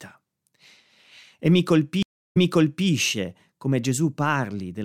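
A speech recording with a stream reconnect between 2.03 and 2.88 s: the connection drops and a fresh decoder restarts, leaving 0.30 s of silence, then the speech resumes 0.55 s earlier and repeats.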